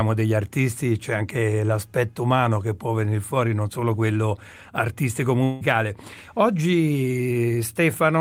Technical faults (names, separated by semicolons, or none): long network dropout